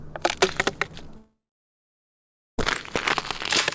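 At 1.17 s the sound fades into a brief buzz or hiss, then goes silent until 2.59 s. A long network dropout is the likely cause.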